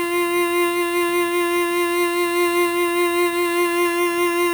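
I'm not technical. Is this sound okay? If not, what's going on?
No. Across the whole music clip there is imaging from sample-and-hold upsampling. The audio was stored at a low rate of 12 kHz and then stretched to 44.1 kHz by simply repeating each sample without smoothing. That leaves mirrored copies of the music above 6 kHz, heard as a bright metallic fizz. Unlike steady background hiss, this fizz gets louder and quieter with the music, and its lowest part moves down when the melody moves up.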